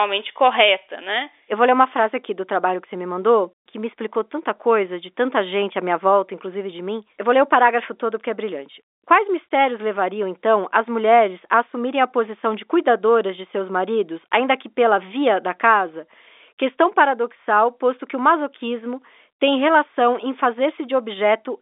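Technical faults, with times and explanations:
No technical faults are present in this speech clip.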